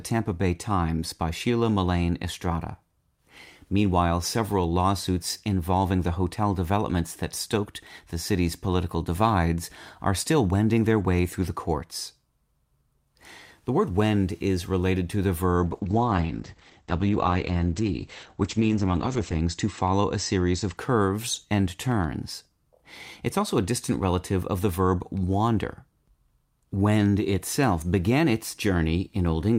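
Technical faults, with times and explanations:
15.64–20.83 s, call bitrate drop: the speech turns rough and muffled as the encoder is starved of bits. The top band shrinks from 20 kHz to 8 kHz, a cut-off that points to roughly 10 kbps, and the sound stays at its worst for 3.72 s. On a spectrogram, everything above 8 kHz abruptly goes blank.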